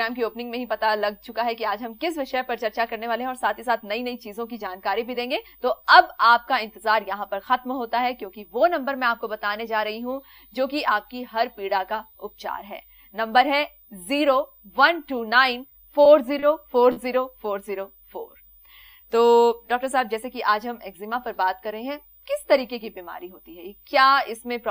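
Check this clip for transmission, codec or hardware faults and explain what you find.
One fault type shows up: four short stalls from a late packet, at 15.69–15.73, 16.03–16.07, 16.39–16.44 and 16.92–16.98 s. Each time the jitter buffer ran dry, and the receiver held the last sound for 20, 20, 30 and 40 ms respectively until the packet arrived. Nothing is lost, but each moment drags with a buzz or dip, and playback falls later by the same amount.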